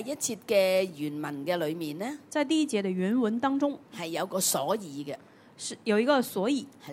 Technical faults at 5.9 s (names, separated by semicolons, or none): none